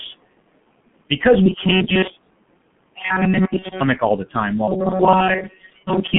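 All the way through, G.723.1 codec damage is heavy: the speech is squeezed into roughly 150 Hz to 3.4 kHz and sounds muffled and hoarse, which fits a bitrate around 6 kbit/s. On top of that, there are noise suppressor artifacts: the room noise, sitting about 20 dB under the speech, gets pulled down by about 21 dB between phrases and rises again under the words. From 3.59 to 3.66 s, just before "all the time", there's VoIP packet loss concealed by the speech codec. The decoder stretches its last sound into a fading tone or noise, which fits one lost 30 ms frame.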